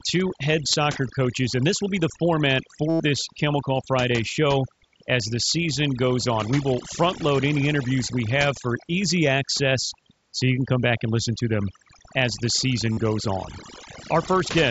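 A speech recording in which the background has dropped away and broken up into twinkling specks where the noise used to be. That is overdone noise removal running through the whole clip: the reduction was set so strong that any frequency band sitting close to its estimate of the noise floor gets cut hard or shut off, and the quieter parts of the voice are caught and removed along with the noise. At 0.72 s there is a brief 15 ms loss. At 2.89 to 3.00 s, about 0.1 s, a buzzy tone holds at full level before a slight warble as the real signal resumes. A shorter version of the same buzz, around 45 ms, comes at 12.93 to 12.97 s. These are concealed Bluetooth headset packet loss. Audio packets from the headset never arrived, and the receiver covered each gap by repeating the closest-matching piece of the last 20 milliseconds or so. A lone loss disappears almost completely, but a run of them turns into that steady repeated tone. 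The link itself is the mSBC headset codec, which carries speech up to 8 kHz and adds only a light graininess.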